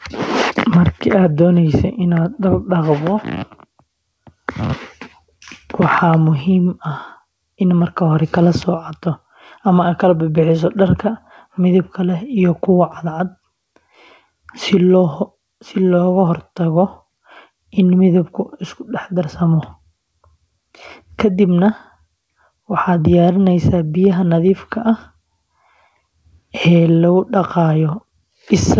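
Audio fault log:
Nothing stood out on listening to this speech, which comes through a G.722 call path at 64 kbps with nothing above 8 kHz.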